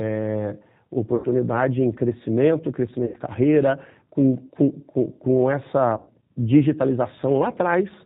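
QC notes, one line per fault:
Throughout: G.729 codec. The speech has the rough, slightly synthetic quality of a low-rate coder that rebuilds the voice from a vocal tract filter, a pitch predictor and a few pulses per frame. The damage is plainly audible, and the thin, edgy timbre fits G.729A at about 8 kbit/s. Nothing above 4 kHz comes through, so sibilants lose their crispness and the top end sounds closed off.
1.16–1.27 s, 3.06–3.17 s and 5.97–6.08 s: VoIP packet loss concealed by the speech codec. Each gap is covered by the decoder extending its last pitch and filter settings while the level drops away. The first two gaps last about 80 ms and the third about 100 ms, which fits four and then five lost 20 ms packets. The speech smears into a buzzy tone or coloured noise that fades. It stays weak for a moment after each gap because every frame is built on the previous one.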